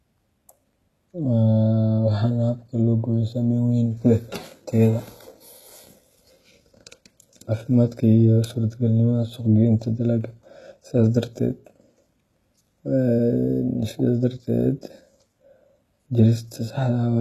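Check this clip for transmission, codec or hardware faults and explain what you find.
HE-AAC compression is likely the cause of damage heard throughout the speech. The upper band is rebuilt by copying lower bands upward, so harmonics misalign and s sounds turn gritty and lispy. Nothing reaches above 12.3 kHz, which fits a bitrate around 16 kbps.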